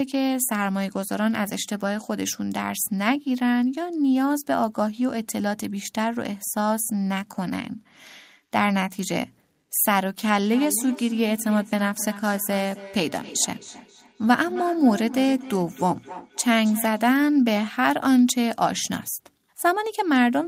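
From 10.4 to 17.24 s, feedback echo between two devices returns each word roughly a third of a second later, about 15 dB down, thinner and ringing, unlike a single room reflection.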